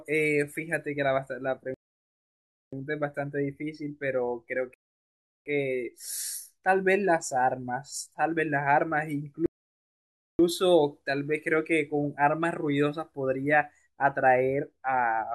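At 1.74 to 2.73 s, 4.74 to 5.46 s and 9.46 to 10.39 s the speech halts in rebuffering stalls of about 0.98, 0.72 and 0.93 s, as playback starves, then resumes exactly where it stopped. Each appears as a flat waveform gap and a blank spectrogram column.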